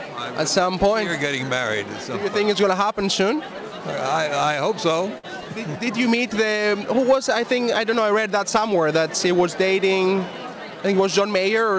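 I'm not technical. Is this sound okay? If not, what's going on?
No. At 5.18 to 5.25 seconds there is a short stall from a late packet. A piece of audio arrived late, so the receiver held the last sound for about 56 milliseconds until it came. Nothing is lost, but that moment sounds briefly stretched, and everything after it runs a bit later.

From 10.85 to 11.29 seconds there is a jitter buffer speed-up. To catch up on delay, the receiver snipped out several tiny slices, a few hundredths of a second in total, so this stretch plays about 7% faster at the same pitch and sounds slightly hurried.

The audio also passed through a call codec, which keeps nothing above 8 kHz, giving it a phone-call character.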